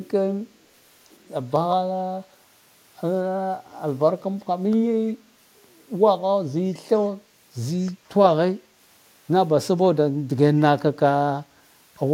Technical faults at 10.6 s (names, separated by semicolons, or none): echo leak